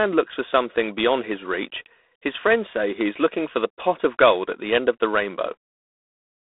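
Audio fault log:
Throughout: G.726 ADPCM. Each sample is sent as a coarse difference from an adaptive prediction, so a plainly audible, rasping hiss rises and falls with the speech, which fits 24 kbit/s. The line spans 250 Hz to 3.6 kHz, with nothing above 3.8 kHz.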